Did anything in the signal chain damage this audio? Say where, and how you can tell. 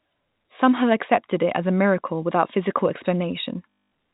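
Yes. At the network stage, packet loss with the last packet repeated damages the sound from 3.76 to 3.90 s. The receiver replays the same short chunk, which fits 20 ms packets, so the run buzzes near 50 Hz. A plain dropout would fall silent instead, and the G.711 telephone band stays intact throughout.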